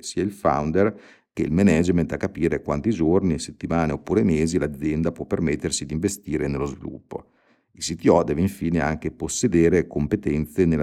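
A speech recording, and nothing technically wrong can be heard in it. There is no fault to place at any time, so no cause needs explaining.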